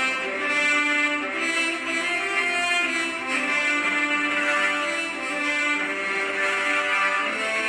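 No technical faults are audible.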